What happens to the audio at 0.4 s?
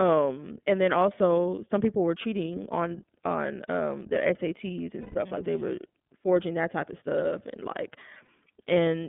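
At 0.4 s you're hearing iLBC codec damage, which runs through the whole clip: speech squeezed into a 150 Hz to 3.5 kHz phone band, sounding plainly rough and synthetic from 30 ms frames coded independently.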